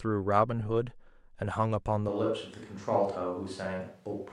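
At 2.09 s the speech turns suddenly roomy and hollow, losing bass at much the same level, with faint background noise, likely a switch to a distant microphone, lasting to the end.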